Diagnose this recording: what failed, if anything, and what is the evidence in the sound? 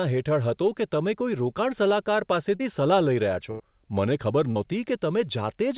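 Short concealed packet loss on the network side: at 2.56–2.62 s and 4.51–4.58 s, about 40 ms of speech each is replaced by continuation of the preceding sound. It is heard as a brief smear blending back, not a silent dropout or click.

Burst of packet loss, also network: at 3.51–3.62 s, about 80 ms is missing. The last sound is held and faded before the speech resumes further on with a stretch gone. That is longer than the smears and skips ahead. Throughout, the band-limiting at 4 kHz fits narrowband telephone coding.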